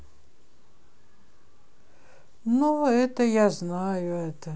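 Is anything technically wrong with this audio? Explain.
No, nothing technically wrong turns up anywhere in this speech recording.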